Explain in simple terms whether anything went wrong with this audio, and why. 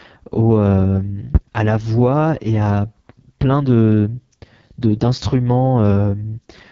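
AMR wideband (HD Voice) codec, throughout: the speech was squeezed by a phone-call codec running at one of its lowest settings. It rebuilds the voice from a simplified model and fills the top with noise, so everything sounds rough and raspy, with nothing above about 7.5 kHz.

Loud pop, at 1.35 to 1.39 s, just before "la voix et à": a single sharp pop jumps well above the speech, which carries on underneath. It was likely caused by a sudden electrical jolt, such as a plug, switch, static discharge or driver glitch.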